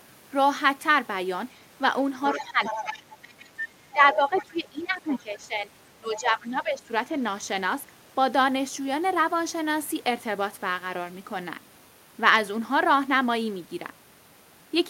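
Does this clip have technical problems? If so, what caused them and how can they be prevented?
Yes. Other side's voice leaking through appears from 2.32 to 3.67 s at about 10 dB below the speech, then in fainter scraps at 4.35–4.45 s, 5.15–5.19 s and 6.15–6.46 s, about 15 to 25 dB down. This is likely loudspeaker sound reaching the microphone that the echo canceller failed to remove. On a spectrogram it shows as a second, weaker set of harmonic bands laid under or between the main speech. Using a headset, or letting the echo canceller converge with correct playback reference timing, prevents it.

Speech is suppressed in double talk from 2.34 to 3.06 s, with dips of up to about 10 dB, and more heavily from 3.93 to 6.91 s, where nearly the whole span is pulled down by up to about 15 dB. Both sides likely spoke at once, and the canceller turned everything down rather than separate the talker from the echo. 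The waveform envelope visibly sags or gaps in those spans, and the spectrogram thins, losing upper bands first. A canceller with proper double-talk detection, or a headset that removes the echo path, prevents it.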